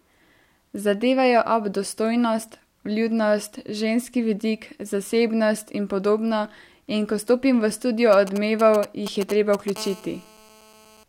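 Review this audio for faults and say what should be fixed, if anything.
A galloping dit-dit-dit of short raspy buzzes cuts across the speech from 8.13 to 9.70 s, sitting roughly 10 dB below it. These are GSM signalling bursts: a 2G phone close to the recording chain sent brief groups of radio bursts while handling network signalling, and a stage in the audio circuit rectified them into sound, repeating at 217 Hz. Keeping phones away from the microphone, cables and preamp, or switched off, prevents this.

Right after, from 9.76 to 11.04 s, a hard, continuous buzz with a strong harmonic rasp runs under the speech at about 21 dB below it, unrelated to what is being said. This is GSM phone buzz: a 2G phone in an active call transmitted steadily 217 times a second, and the circuit demodulated each radio pulse into an audible 217 Hz tone. Moving the handset well away from the gear and using shielded, properly grounded cabling prevents it.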